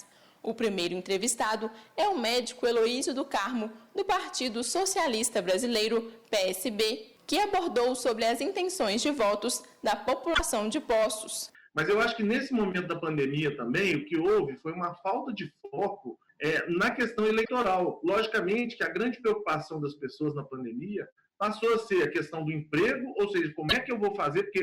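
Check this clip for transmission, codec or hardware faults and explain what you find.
Two problems stand out: constant overload and three short stream glitches.

Hard clipping runs through the whole clip. The signal is driven about 12 dB past what the stage can pass, so the peaks get sliced flat, with roughly one sample in twenty affected. Those squared-off tops throw harmonics high up the spectrum, giving a harsh fuzz on every loud moment.

There's also damaged data in the compressed stream at 10.31–10.40 s, 17.41–17.49 s and 23.66–23.73 s, each under a tenth of a second. Corrupt bytes there make the decoder misread frames and lose sync while it hunts for the next header, so each spot comes out as a brief chirp, squawk, click or short hole.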